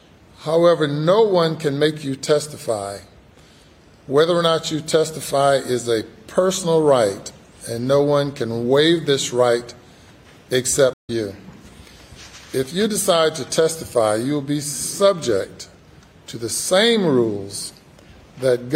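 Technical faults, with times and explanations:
10.93–11.10 s, stream reconnect: the connection dropped and a fresh decoder restarted mid-stream, leaving 97 ms of silence, then sound resumes roughly a tenth of a second further on, skipping material. Waveform and spectrogram show a blank vertical gap and a discontinuous restart.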